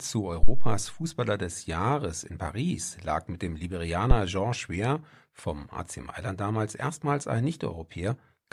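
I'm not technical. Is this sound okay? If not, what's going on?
No. There are two phantom power thumps. One runs from 0.43 to 0.89 seconds. The other comes at 4.11 to 4.17 seconds, just after "lag mit dem." Each is a deep, dull thud. The first fades over about a tenth of a second. The second is shorter and dies away almost at once. Both come from power to the microphone being switched while it was live. That sudden jolt passed straight into the recording as a bump.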